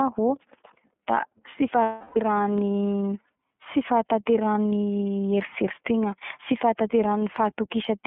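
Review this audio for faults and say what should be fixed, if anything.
The whole recording runs through the iLBC codec. The band is confined to about 150 Hz to 3.5 kHz, with the rough, slightly synthetic texture of 30 ms frames coded independently, which fits the 13.33 kbps mode. Unlike a plain low-pass, the graininess tracks the excitation coding. To prevent it, use a wideband codec.

Lost iLBC frames fill 1.82 to 2.17 s, about 330 ms, consistent with eleven missing frames. The decoder repeats the last pitch cycle mixed with noise and fading, which gives a held, buzzy vowel rather than silence. Clean speech resumes immediately because each frame stands alone. To prevent it, add jitter buffering and redundancy or FEC on the network path.

Bit error spikes appear at 2.58 s and 3.88 s, each a single sample jumping by a power of two and snapping back. They sound like isolated sharp ticks, broadband and unrelated to the sound, unlike codec artefacts that follow the signal. 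To prevent them, add error checking to the digital link or storage.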